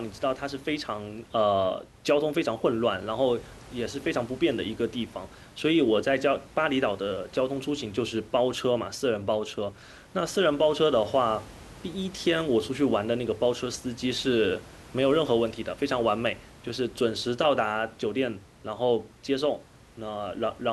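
Nothing goes wrong anywhere in this speech recording; the faint room noise sitting about 23 dB below the speech is just part of the space the microphone was in.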